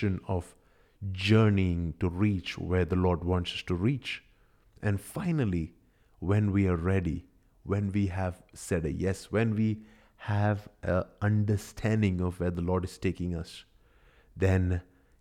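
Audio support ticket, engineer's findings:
No audible faults found on listening to the speech recording. No symptom to log and no component implicated.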